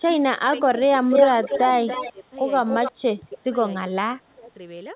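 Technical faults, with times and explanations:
0.53–0.80 s, 1.30–1.49 s, 2.12–2.32 s, 2.92–3.48 s and 3.90–4.51 s, speech suppressed in double talk: the speech dips in level while the far side is also talking. The first two dips are slight, a few dB. The later ones deepen to between about 15 and 25 dB, with parts of the speech almost gone. The likely cause is an echo canceller that cannot tell the local talker from loudspeaker echo and turns both down. Nothing is added. Speech is taken away, which separates this from an echo leak.
1.10–2.12 s and 2.68–2.92 s, echo leak: a second copy of the speech trails the original by 289 ms. In the first stretch it is about as loud as the speech itself, and in the second it is a little quieter. The likely cause is a loudspeaker on the far end whose canceller let part of the played-back call return through its microphone. Here a delayed duplicate sits on top of the speech, rather than the speech being cut. 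Like the rest of the call audio, this copy has nothing above 4 kHz.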